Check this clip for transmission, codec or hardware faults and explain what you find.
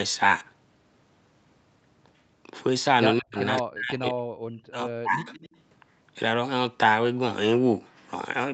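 Two call faults are audible, both in the middle of the speech.

Speech suppressed in double talk: from 3.2 to 3.37 s and again from 3.62 to 5.28 s, the speech dips sharply, by as much as about 40 dB. The likely cause is the echo canceller turning everything down while both sides talked.

Echo leak: from 3.38 to 3.61 s and from 5.25 to 5.6 s, a faint copy of the speech trails 168 ms behind. It sits about 15 dB, then about 25 dB, below the speech. This is likely loudspeaker echo the canceller failed to remove.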